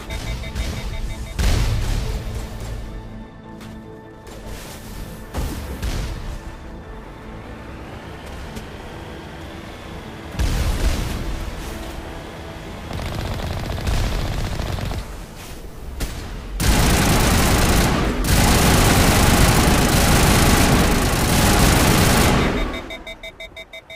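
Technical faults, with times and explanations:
0.47 to 0.75 s and 4.62 to 4.72 s, DAB burbling. Short blips of noise sit over the sound. Weak reception let bit errors slip past error correction. Damaged samples put short noise blips in single sub-bands, frame by frame. The first burst is longer and denser.
17.96 to 22.88 s, doubled audio track. A second full-band copy runs about a second and a half behind, at roughly equal level. It has no decay or room colour. It starts and stops abruptly. This is likely a slower second capture path or an edit holding two copies.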